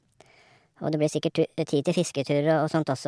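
From start to end the speech plays about 1.38 times too fast and roughly 5.5 semitones high, a wrong sample rate fault. Audio captured at 16 kHz is being played at 22 kHz without resampling, so pitch and tempo rise together, giving a hurried, chipmunk-like quality.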